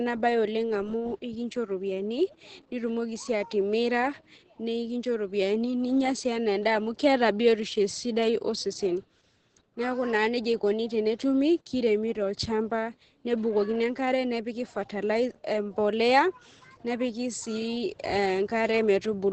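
It's a speech clip with heavy Opus voice compression the whole way through, which fits SILK mode at a very low rate, around 10 kbps. Nothing comes through above about 8.6 kHz, so it's dull, and the coarsely coded excitation leaves the voice hoarse and a bit robotic.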